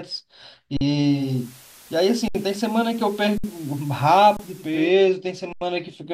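At 0.77 s the speech freezes flat for about 43 ms, then resumes with only a soft edge. This is an underrun with held sample: the output buffer ran dry and the converter held its last value. Nothing was skipped, so playback picked up where it stopped. The 2048-sample length points to a 48 kHz stream.

From 1.01 s to 4.94 s, hiss rises about 25 dB below the speech while the level stays the same. This is digital radio blending to analogue: the receiver lost its digital signal and cross-faded over roughly half a second to the station's FM broadcast, then faded back.

Within that stretch the same held-sample dropouts recur at 2.28 s (66 ms), 3.38 s (60 ms) and 4.37 s (25 ms). The longest, at 5.53 s, lasts 85 ms, which fits a 4096-sample gap.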